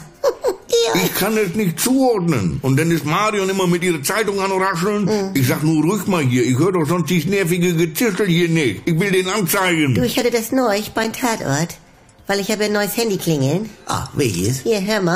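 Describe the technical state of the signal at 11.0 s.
At 11.04 s there is a gap between stream segments: an 8 ms hole of digital silence with abrupt edges. The timestamps of adjacent segments, which fits 2-second segment boundaries, fail to meet, so the player pads the shortfall with silence. No audio content is dropped.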